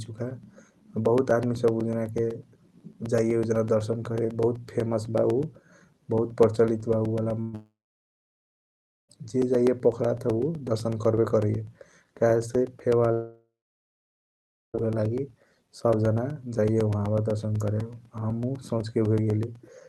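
From 0.06 s right to the end there are periodic USB or driver dropouts: tiny silent gaps every 0.125 s, so a steady eight-per-second ticking runs under the speech. At 7.41 s a burst of packet loss takes out about 120 ms; the last sound is stretched and faded rather than cut, and the speech jumps ahead. That runs straight into a stretch from 7.55 to 9.11 s that sounds like a long network dropout, likely: a short fading tail and then roughly 1.4 s of silence before the speech returns with a chunk missing. The same thing happens again from 13.13 to 14.88 s, about 1.6 s lost, most of it silent. The call-style coding, with the top end rolled off around 12 kHz, adds a dullness throughout.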